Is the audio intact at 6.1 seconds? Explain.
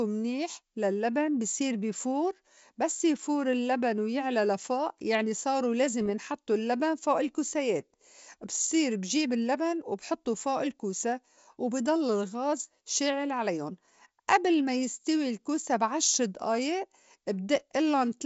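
No. From 6.01 to 6.10 s, between "ويعلى لفوء يعني صارو" and "ينحطّو اللّبن فوء الكوسايات", bit errors on an ADPCM link (roughly one or two per thousand bits) throw off the G.722 decoder's step size and predictor, producing pops and a rough, briefly level-shifting burst.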